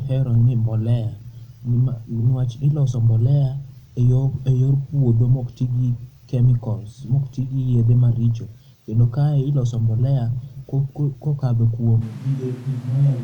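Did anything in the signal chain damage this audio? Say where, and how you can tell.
Yes, right at the end. From 12.03 s to the end of the clip, the speech abruptly turns roomy and hollow. The low end thins out, the level drops by around 5 dB, and room noise rises to roughly 30 dB below the speech. That instant change in tone and level is the signature of a switch to a distant microphone. The likely cause is a capture-stage problem where the close mic's feed dropped out and a farther one took over.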